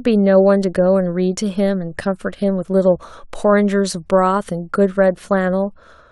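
No technical faults can be heard at any point in the recording.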